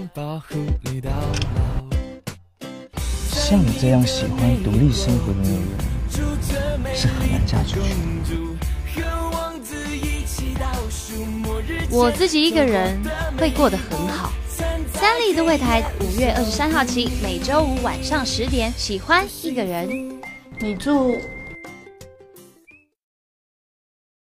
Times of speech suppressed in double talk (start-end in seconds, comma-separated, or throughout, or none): none